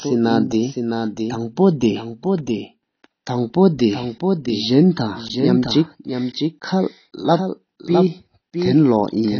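From start to finish the speech carries a doubled audio track: a second full-band copy trails the original by roughly 0.7 s and sits about 5 dB lower. It has no reverb tail or room colour, so it isn't an acoustic echo. It sounds like a clean, slightly quieter repeat stepping on each phrase, most likely the same signal reaching the mix twice, once through a slower path.

Throughout, there's also plainly audible AAC compression. Nothing survives above 6.5 kHz, so the top end sounds dull and closed in, and the speech has a smeared, warbly texture, with fizz around the sibilants. That points to AAC-LC at a low bitrate, something like 24 kbps. The likely cause is that the encoder ran short of bits, threw away the high band and coarsely quantised what it kept.

At 5.28 s there's a block of digital silence about 15 ms long: the sound cuts out and comes back with no fade. At this length you hear a quick tick or pop. 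It's the typical result of the output buffer not being filled in time, which leaves a run of zeros in the stream.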